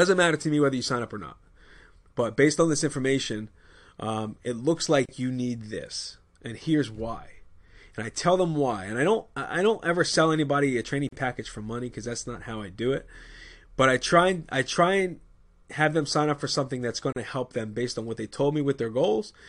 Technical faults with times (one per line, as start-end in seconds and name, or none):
5.06-5.09 gap at a join of encoded pieces
11.09-11.12 gap at a join of encoded pieces
17.12-17.16 gap at a join of encoded pieces